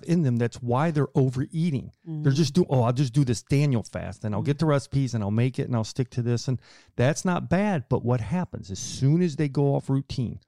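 Channel delay (comb filtering) affects this speech recording from 8.38 s to the end at 10.47 s. One channel lags by roughly a single sample, so the mono sum cancels near 20 kHz and dulls the top end.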